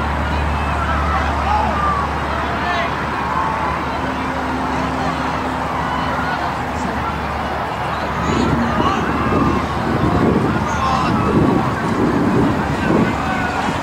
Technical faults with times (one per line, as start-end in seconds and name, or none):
none